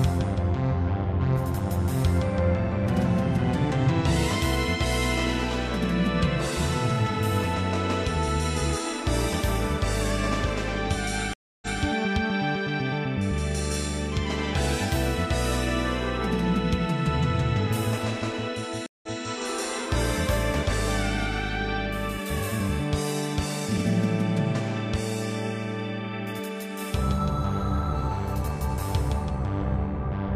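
At 11.34–11.80 s and 18.86–19.22 s, a stream reconnect leaves 283 ms and then 167 ms of silence. Unlike a simple dropout, the sound resumes about 0.19 s earlier, repeating material through a fresh decoder.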